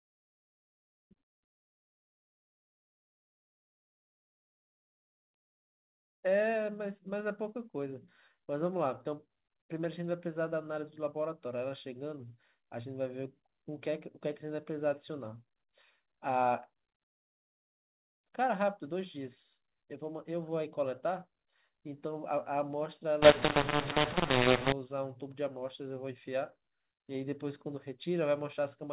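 Telephone speech, carried over G.711 mu-law coding whose band stops at 4 kHz, which fits an 8 kHz telephone line. From 23.22 to 24.72 s there is a mu-law and A-law mix-up. Audio coded as mu-law is decoded as A-law. Levels get scrambled. Some peaks jump, others shrink. The speech turns harsh and distorted, and the quiet gaps fill with noise.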